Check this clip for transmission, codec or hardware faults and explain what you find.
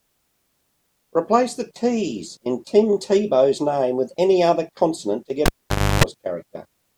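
One hardware fault is present. From 5.46 to 6.04 s, the cable is pulled and plugged in. A pop cuts the speech. Near silence lasts 0.54 s, with 0.31 s of 50 Hz mains buzz before a second pop.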